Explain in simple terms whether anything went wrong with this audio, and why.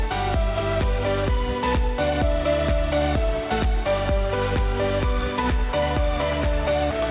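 Nothing went wrong here.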